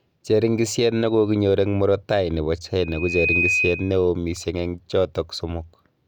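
Speech clip with a loudspeaker feedback squeal from 2.80 to 4.06 s: a 2.5 kHz tone swells over about half a second to roughly the speech level, as the mic picks up its own speaker.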